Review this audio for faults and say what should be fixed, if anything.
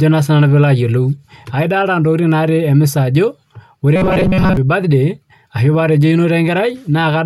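From 3.96 to 4.57 s the speech turns into a rigid metallic buzz near 188 Hz: robotic sound from repeated short buffers, likely audio arriving too seldom, so roughly 5 ms chunks loop through most of that stretch. Give the stream a larger jitter buffer or steadier delivery so playback never runs dry.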